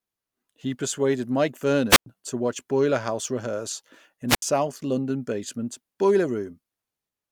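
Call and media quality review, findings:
Wireless microphone squelch dropout, 1.89–2.06 s and 4.28–4.42 s. Brief hiss, then near-silent holes of about 100 ms and 75 ms. The analogue FM link's RF level faded below threshold, receiver squelch muted output, and the speech then resumed.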